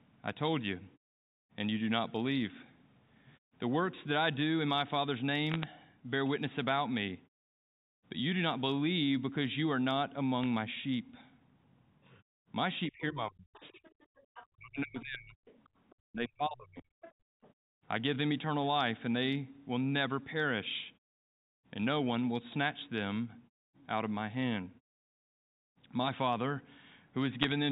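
Short bursts of bit errors on a digital phone line come first, at 5.52 to 5.63 s and again at 10.43 to 10.46 s. Each flipped bit in the mu-law stream corrupts a single sample, and hits on the sign or upper bits produce sharp ticks. Here they form a brief crackle layered over the speech, at an error rate well under one percent, while the speech underneath stays intact.

From 12.89 to 13.80 s, 14.53 to 15.42 s and 16.03 to 16.85 s the talker's level is pushed down, with drops of roughly 35 to 40 dB. The likely cause is speech suppressed in double talk. With both parties talking at once, the echo canceller cannot separate the near talker from loudspeaker echo and attenuates everything. The result is a suppressed voice for most of each stretch.

Around those stretches, a second voice is audible at 13.54 to 14.47 s, 15.48 to 15.95 s and 17.02 to 17.53 s. It sits well below the talker, about 20 to 30 dB down. 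This is likely the other side's voice leaking through. The far end plays from a loudspeaker, and the canceller leaves a residual of it in the microphone signal, so it comes through faintly.

The room background is gated by the echo canceller twice while the loudspeaker is active. At 14.08 to 14.25 s it dips by about 17 dB for a moment. At 17.13 to 17.42 s the dip is deeper, about 40 dB, and lasts a few hundred milliseconds. In both cases the canceller clamps the microphone hard, and the ambience dips before returning once the canceller releases.

At 27.42 to 27.52 s, near the end, another cluster of bit errors on the digital phone line adds a short burst of ticks and crackle over the speech. It matches the earlier bursts in character and the first burst in rate. Above 4 kHz there is nothing, as the telephone band allows.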